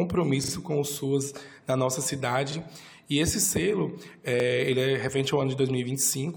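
Repeated buffer stutters occur at 0.44–0.52 s, where a short slice plays three times, and at 2.52 and 4.40 s, where one slice plays twice. Each repeat lasts about 40 ms, which fits a 40 ms playback buffer. Identical waveform blocks appear tiled, with vertical seams on the spectrogram at each hard join. No audio seems to be skipped.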